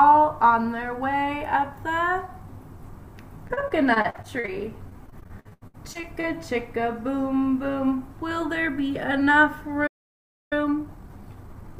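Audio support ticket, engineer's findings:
Repeated packet loss (robotic sound), 3.47–4.50 s. Choppy texture. Roughly a dozen short holes, longest 42 ms, about a quarter of the span filled by extending the preceding sound. Network or jitter-buffer underrun feeding loss concealment.

Repeated packet loss (robotic sound), 4.90–6.25 s. Same symptom, heavier. Thirteen-odd holes, longest 79 ms, nearly 30% concealed. Repeated late or missing packets keep the concealment running, producing the robotic smear.

Playback stall, 9.87–10.53 s. Output drops to silence mid-flow for about 0.64 s, then resumes. Likely cause: player starved of data or output thread blocked. Probable component is the playout buffer or audio render thread.

Time-compressed catch-up, 10.53 s to end. Audio hurried at about 1.25x with pitch held. The player drains its post-stall backlog by cutting small segments and cross-fading the joins. 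Component: adaptive playout or time-scale modification stage.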